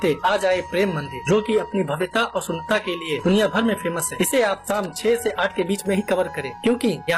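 From the start to 5.68 s the audio is an adaptive stream starting at a low bitrate. The treble sounds thin and synthetic, with nothing above about 12.4 kHz, and codec artefacts are stronger, which fits a very low-rate HE-AAC version at around 16 kbit/s. At 5.68 s quality jumps cleanly to a fuller, likely AAC-LC rendition near 96 kbit/s, with no gap. A mid-stream dropout or downswitch would instead degrade later or leave a silence.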